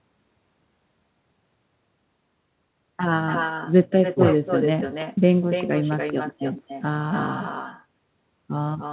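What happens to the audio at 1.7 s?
At 1.7 s you're hearing the echo with no canceller, which runs through the whole clip rather than starting there. The far end is playing the call out loud, its mic catches it, and nothing strips it out, so the speech comes back about a third of a second later, roughly 7 dB down, as a thinner shadow. It sits inside the narrowband call sound, with nothing above 4 kHz, which fits a G.711-style telephone codec.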